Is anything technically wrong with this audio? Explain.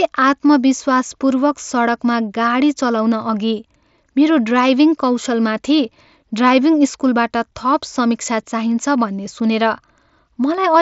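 No, nothing is technically wrong with this audio.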